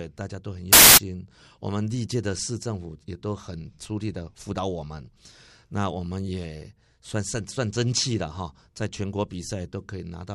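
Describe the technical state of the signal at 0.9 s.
Samples built from the wrong bytes, from 0.73 to 0.97 s: the decoder assembles each sample from misaligned or swapped bytes, so the rapidly varying low-order bits land in the high-order position. The speech is replaced by loud, harsh broadband noise across that quarter second.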